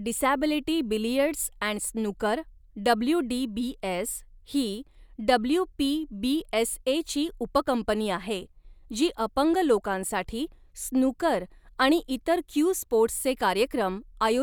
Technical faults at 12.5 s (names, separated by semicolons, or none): none